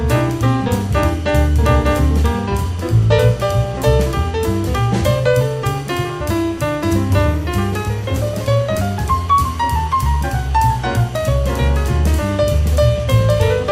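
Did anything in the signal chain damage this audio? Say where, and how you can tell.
No, nothing in the signal chain stood out as having damaged this audio when I listened to it.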